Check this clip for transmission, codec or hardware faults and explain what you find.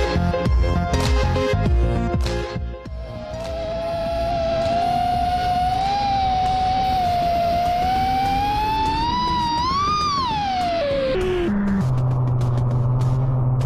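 Two faults are audible, one from overload and one from the compressed stream.

Hard clipping, 0.0 to 2.27 s: the level runs about 6 dB past what a stage can pass, so peaks are sliced flat, giving a harsh fuzz on loud moments.

Damaged data in a compressed stream, 9.06 to 9.12 s: corrupted bytes make the decoder lose frame sync and hunt for the next header, producing a brief glitch such as a chirp, squawk, click or short hole.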